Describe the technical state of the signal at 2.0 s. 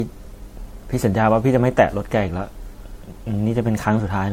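At 2.0 s you're hearing the generation loss that runs through the whole clip. The speech has that swirly, hollow, smeared quality, consonant attacks are soft, and nothing reaches above 16.5 kHz. It's likely from re-encoding through lossy MP3 about four times, which fits a 64 kbit/s chain. Each pass re-quantises on a shifted frame grid, so the noise and spectral holes pile up beyond what that bitrate would do in a single pass.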